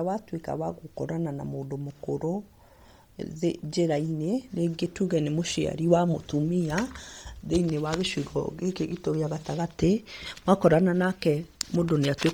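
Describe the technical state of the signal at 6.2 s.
At 6.2 s the signal carries the same damage it has from start to finish: Bluetooth LC3 compression, likely from a low-rate link running at 32 kbps with 10 ms frames. Starved of bits, the codec discards much of the upper spectrum in each frame and substitutes shaped noise there. The speech comes out heavily processed, with a breathy, grainy edge on the voice, and no content reaches above about 20.2 kHz.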